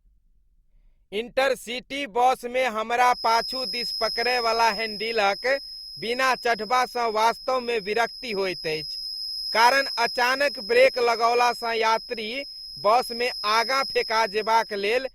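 Speech, and from about 3.03 s right through to the end there's a feedback whistle sitting behind it: a thin, steady tone at 5.1 kHz, roughly 10 dB under the speech, slowly swelling and fading in level. The likely cause is a speaker-to-mic loop running just shy of full feedback, so that one frequency keeps ringing on its own without ever tipping over into a proper howl.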